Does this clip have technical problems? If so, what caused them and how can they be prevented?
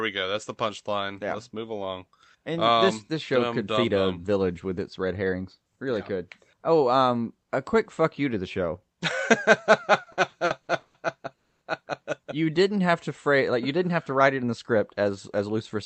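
Yes. Between 10.03 and 10.97 s the speech shows repeated stalls (stutter): six short gaps, the longest 150 ms, in which the receiver stretched the last sound instead of playing new audio. About 370 ms was filled this way, roughly 39% of that span, with nothing lost, so the speech drags and stumbles. Packets arrived late or slower than playout, draining the jitter buffer repeatedly. Preventing it means stabilising the network path or letting the jitter buffer hold a larger margin.

From 11.36 to 11.64 s there is a call audio freeze. The sound holds briefly and then falls to near silence for about 240 ms, about 250 ms in total, before resuming where it stopped with nothing missing. The likely cause is a burst of packets delayed by about 250 ms, which emptied the jitter buffer until they arrived. Preventing it means reducing delay spikes, for example through traffic prioritisation and a less congested link.

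From 13.87 to 15.76 s, right after "to phrase like you", a jitter buffer speed-up runs the speech at about 107% with unchanged pitch, giving it a slightly hurried quality. The buffer held more audio than its target, so the receiver repeatedly removed pitch-period-sized slices, about 150 ms in all, to bring latency back down. Preventing it means avoiding the bunched packet arrivals that overfill the buffer.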